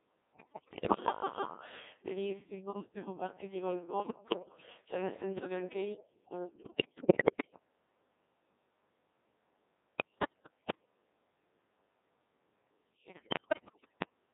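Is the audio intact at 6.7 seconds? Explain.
No. At 6.7 seconds the speech is inside a burst of bit errors on digital voice radio, running from about 6.56 to 7.59 s. Roughly one bit in five arrives flipped, and because each bit in so sparse a stream sets the pitch, level, voicing or spectral shape of an entire frame, the synthetic voice lurches in pitch and loudness and dissolves into warbling, bleepy gibberish. On a spectrogram the harmonic stripes jump abruptly between frames and the formant bands scatter. The waveform shows sudden steps in amplitude.

Underneath, the whole clip passes through the Codec 2 vocoder, at a rate that fits its 1.6 kbit/s mode and with heavy damage. Rather than preserving the waveform, the decoder rebuilds the voice from sine waves driven by pitch, voicing, energy and a spectral envelope, so it sounds robotic and buzzy. A spectrogram shows unnaturally regular harmonics confined to about 200 Hz to 3.6 kHz, and the waveform looks smooth and synthetic, without the fine detail of natural speech.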